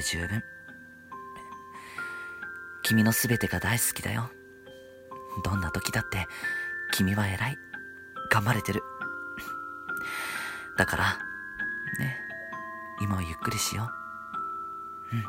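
From 0.10 to 15.28 s, clock slip clicks recur about every 30 ms as a rattle. The likely cause is unsynchronised clocks around 700 ppm apart, dropping or repeating single samples. A spectrogram shows evenly spaced thin vertical lines.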